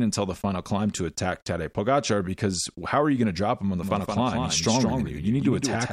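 From 3.83 s, right after "drop him on the", the speech is likely being picked up a second time by a slower path, creating a doubled audio track: a full-band copy about 5 dB quieter trails roughly 150 ms behind, starting abruptly and running to the end.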